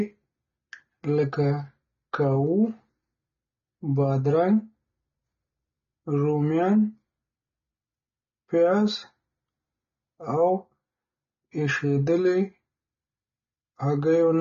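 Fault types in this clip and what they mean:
AAC compression: the speech sounds dull and smeared, with nothing above 6.9 kHz and plainly audible coding damage. The likely cause is AAC-LC at a low bitrate, which fits about 24 kbps, where the encoder lowers its cut-off and coarsely quantises what remains.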